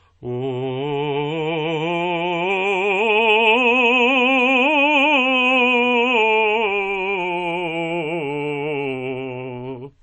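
A music clip with a hard ceiling at 8.3 kHz for its whole length. Nothing sounds above it, so the top end is dull. The likely cause is low-bitrate audio saved at a high bitrate, which fits a 32 kbit/s MP3 re-encoded at 192 kbit/s.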